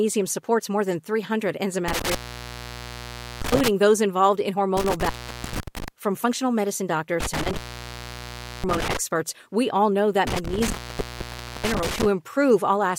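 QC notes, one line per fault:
1.88–3.68 s, 4.77–5.88 s, 7.20–8.97 s, 10.27–12.07 s, intermittent contact: the speech drops out four times with crackle on either side, leaving faint hiss for 1.27 s, 0.47 s, 1.07 s and 0.94 s. The first clears just before "those involved in", the second begins right after it, and the last follows "we all know that". A loose plug or cable is breaking the signal path, and the crackle is the contact scraping open and shut.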